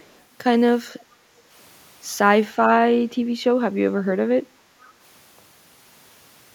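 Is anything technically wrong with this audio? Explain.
Yes. There is echo leak in two short spots: 0.00 to 0.21 s, and 4.80 to 4.92 s. Each is a faint delayed copy of the speech, arriving about 0.48 s late, roughly 40 dB below the main speech in the first instance and roughly 35 dB below it in the second. The likely cause is a far end playing the call over a loudspeaker whose echo canceller let residual pickup through and returned it. Both scraps are brief and quiet.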